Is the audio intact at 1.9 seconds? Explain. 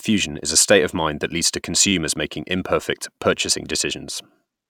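No. A brief buzzy stutter runs from 1.88 to 1.92 s: a repeated buffer, one 10 ms piece replayed four extra times because new audio arrived late.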